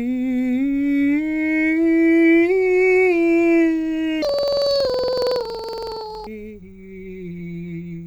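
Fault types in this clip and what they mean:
Planar audio read as interleaved: from 4.22 to 6.30 s the music jumps up an octave with a flutter at about 21.5 Hz. Each 46 ms block, which fits a 2048-sample layout, gets played twice at double speed, left channel then right, so the tempo still holds.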